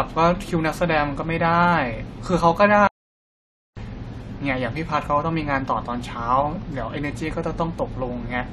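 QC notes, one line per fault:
2.87–3.77 s, playback stall: speech drops to silence mid-flow for 0.9 s, likely because the player ran short of data, then carries on.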